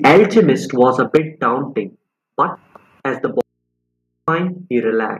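From 0.04 to 0.49 s the loudest syllables break up with a harsh, crackling edge. This is microphone overload. The input was likely set too high, driving peaks about 6 dB past the converter's limit so their tops were cut flat.

At 0.17 s, inside that stretch, the level drops suddenly by about 3 dB. This is the microphone volume being stepped down, likely by the call software reacting to the clipping. Speech and background fall together in one step.

Overload returns from 0.8 to 1.17 s, milder this time, with peaks about 3 dB over. At 1.17 s the volume steps down again, by about 6 dB, right after the distorted peak.

From 3.41 to 4.28 s the speech vanishes abruptly for 0.87 s. This is an audio dropout to a faint residue. Only mains hum remains, far below the speech level. The signal was likely lost while the input stayed open.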